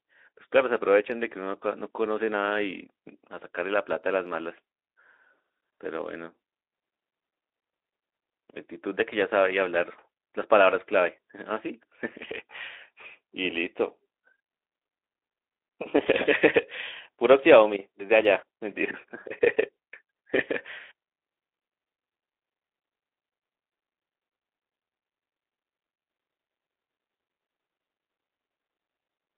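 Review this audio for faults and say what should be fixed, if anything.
Nothing here needs fixing; the speech comes through a Speex connection at 15 kbps on a 300 Hz to 3.7 kHz phone-style band, and there's no fault to chase down.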